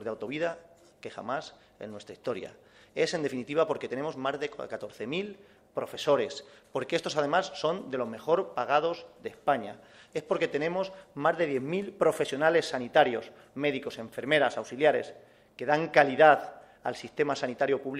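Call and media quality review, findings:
Clock drift between sender and receiver, whole clip: sender clock running roughly 4% fast. Jitter buffer keeps overfilling; receiver must discard audio to hold latency. Heard as faintly hurried, uneven pacing rather than a steady defect. Probable component: endpoint clock sync.

Repeated timing corrections, 0.21 s to 17.83 s: receiver trimming short pieces of audio, always in the same direction, at uneven spacing, net playout near 103% speed. Small hiccups and slightly unsteady tempo. Probable component: jitter buffer adaptive playout.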